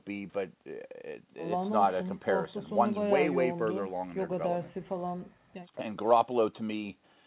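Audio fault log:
No faults are present in this speech recording. The call path carries it with nothing above 4 kHz, which fits G.711 mu-law telephone coding at 64 kbps.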